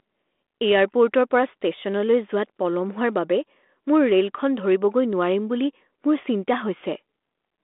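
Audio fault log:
No faults heard in this speech recording.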